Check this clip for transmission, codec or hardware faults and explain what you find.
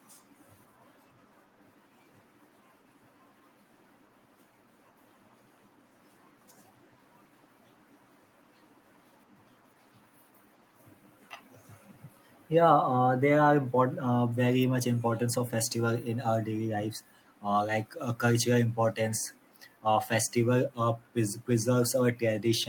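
The clip shows no faults to explain.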